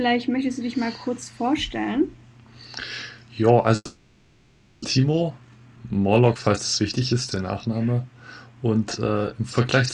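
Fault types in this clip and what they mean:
Long network dropout: From 3.75 to 4.85 s the sound stops arriving, likely from a network outage. The last sound is stretched into a fading buzz, then a brief silence. When audio resumes, about 0.8 s of it is missing.
Jitter buffer speed-up: From 4.97 to 6.90 s the receiver trims tiny pitch-period pieces to cut the extra delay. Playback runs at about 114 percent speed. The pitch stays the same, but the sound feels rushed. Roughly 0.3 s is removed.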